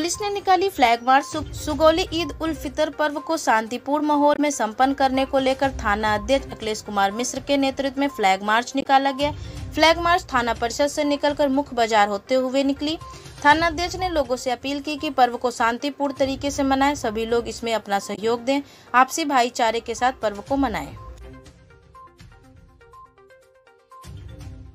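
Three brief glitches at 4.34, 8.80 and 18.14 s mark damaged data in a compressed stream, where the decoder misreads corrupted frames and resyncs at the next header.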